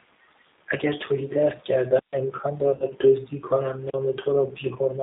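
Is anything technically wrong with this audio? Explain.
Yes. Throughout, the G.729 codec at 8 kbit/s confines the speech to roughly 250 Hz to 3.7 kHz, and its pulse-based rebuilding of each frame leaves a rough, synthetic edge rather than the plain dullness of simple band-limiting.

VoIP packet loss concealed by the speech codec occurs from 2.75 to 2.88 s and from 4.48 to 4.52 s. The decoder stretches its last pitch and filter into a fading buzzy tone or coloured noise instead of leaving silence or a click. The first gap, about 50 ms, fits five lost 10 ms frames, and the second, about 10 ms, fits one.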